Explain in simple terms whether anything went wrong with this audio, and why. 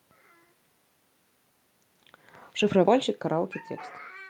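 From 2.69 s to the end at 4.30 s, automatic gain falling: the level control judged the input too loud or its background noise too strong and turned it down, so the speech and room noise sink together. The level changes near 1.5 s and 4 s come from the talker moving.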